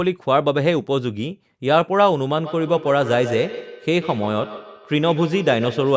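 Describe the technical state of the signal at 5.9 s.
At 5.9 s, feedback echo between two devices, running from 2.38 s to the end, returns the speech about every 150 ms, thin and ringing, at about 12 dB below the direct sound.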